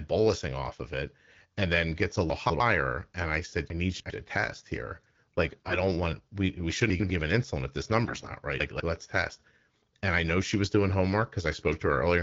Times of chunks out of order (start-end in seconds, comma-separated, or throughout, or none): 2.30-2.60, 3.70-4.10, 8.60-8.80